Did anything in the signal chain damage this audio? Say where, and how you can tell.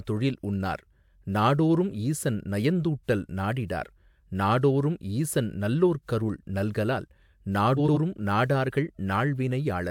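Yes. Frames out of order at the network stage: two neighbouring runs of frames, each two frames long, arrived swapped and were decoded as received, so from 7.77 to 7.97 s the speech plays with its halves exchanged, a garbled flutter. No time is lost.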